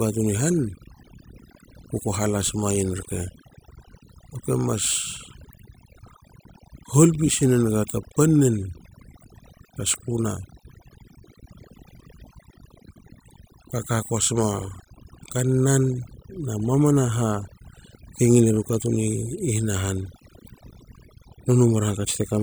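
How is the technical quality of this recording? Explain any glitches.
The recording has one clear problem, and it runs the whole way through: overdone noise removal. A noise reduction pass was pushed too hard, so it shuts off individual frequency bands whenever they sit close to what it thinks is noise, and the quieter parts of the speech get cut along with the noise. You can hear it in the gaps, which drop to near silence with little twinkling specks.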